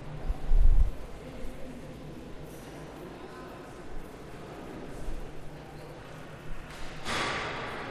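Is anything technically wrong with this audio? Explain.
No, there are no technical faults.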